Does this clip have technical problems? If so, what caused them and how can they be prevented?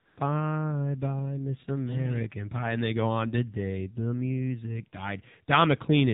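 Yes. Throughout the speech there is AMR narrowband mobile codec damage, and it is plainly audible. The band stops at 4 kHz, so sibilants and breath detail are missing. The voice sounds buzzy and synthetic because the encoder models the vocal tract and drives it with only a few pulses per 5 ms subframe. The amount of coarseness fits a low mode of about 7.4 kbps, where each 20 ms frame gets little detail. Prevention: carry the call over a wideband or higher-rate codec such as AMR-WB, or record locally instead of through the mobile path.

From 0.00 to 0.18 s there is AMR comfort noise. For those first 175 ms the phone sent no speech frames because it treated the talker as silent, and the receiver filled the gap with smooth synthetic noise built from a rough estimate of level and spectrum. The real background is replaced by an even hiss that switches over to the coded signal as speech frames resume. 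Prevention: disable discontinuous transmission or voice activity detection on the sending device.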